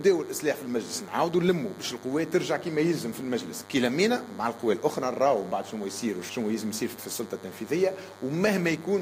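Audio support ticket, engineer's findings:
DECT cordless phone buzz throughout: thin 100 Hz buzz, roughly 20 dB under signal. Nearby DECT 10 ms bursts rectified in audio circuit. Spectrogram: even 100 Hz harmonic comb, full length.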